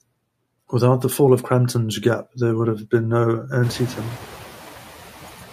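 A noise suppressor runs on this speech clip from start to finish, cutting what it judges to be steady background noise by about 8 dB in each frequency band, frame by frame. Because that reduction follows the speech, the noise floor dips in the gaps and comes back up underneath the talking. These are noise suppressor artifacts, present throughout rather than at any one moment. Around 3.5 s the room noise itself jumps by about 22 dB, settling roughly 17 dB below the speech, and the suppressor's noise estimate falls behind. From 3.63 to 4.25 s the suppressor is catching up: for those 620 ms the louder noise passes with only about 6 dB of reduction, so it is briefly more exposed, before sinking as the estimate adapts to the new level.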